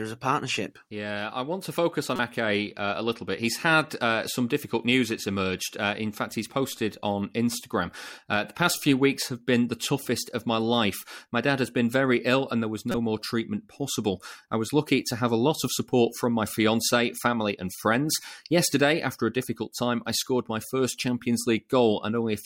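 At 2.16 to 2.20 s, right after "want to focus on", and again at 12.92 to 12.97 s, between "ill and there was" and "more treatment possible I", a corrupt frame decoded produces a brief glitch. Damaged bits in the compressed stream were decoded anyway, and misread gains put energy in the wrong bands for a few frames each time. On a spectrogram each burst shows as a short, sharp-edged smear unrelated to the surrounding harmonics. On the waveform it appears as a spike peaking around -15 dBFS.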